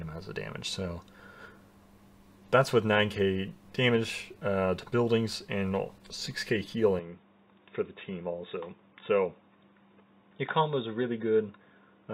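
At 6.99 s the audio turns duller and stays that way to the end, with nothing above 3.8 kHz, a level drop of about 5 dB and a faint new noise floor well below the signal. There is no gap at the change. This is likely an input switched to a poorer device. A codec bandwidth drop would narrow the band but keep the level and background unchanged. Here the tone, loudness and noise all shift together.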